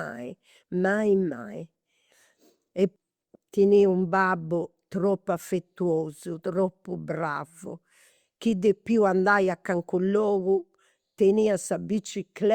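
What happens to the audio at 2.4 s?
Nothing goes wrong at 2.4 s; the speech there is intact, with no dropout, click, distortion or other technical fault at that moment.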